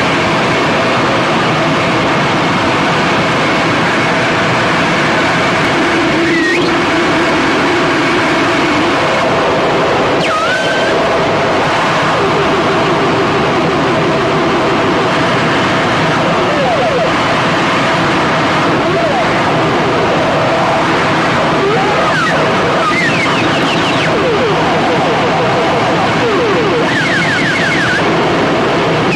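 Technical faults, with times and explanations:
5.65, 11.64, 17.63 and 23.63 s, audio missing between chunks: Four tiny skips fall about 6 s apart, each dropping only a few milliseconds of sound. The audio on either side is butted together with no gap. The result is a brief jump rather than a pause. The steady spacing likely comes from processing in 6-second blocks, with a sliver lost each time one block closes and the next one opens.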